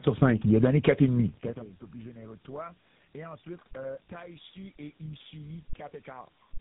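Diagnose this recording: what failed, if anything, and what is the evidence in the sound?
Tandem speech coding at the codec stage affects the whole speech clip. It sounds rough, muffled and warbly, with nothing above about 3.8 kHz. That points to three speech coders in a row, ending in GSM full rate. Each one re-encodes the previous coder's already degraded output.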